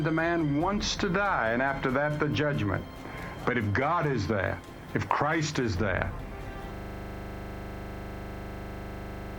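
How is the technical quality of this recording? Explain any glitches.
The recording has one serious glitch, a system hang loop starting at 6.75 s and running to the very end. From that point the audio collapses into a steady buzz: a single 40 ms fragment repeats exactly, over and over, about 66 times, producing a mechanical pulse at 25 Hz. The cause is a frozen computer or audio driver. While the system stalled, the sound hardware kept replaying the last filled piece of its ring buffer.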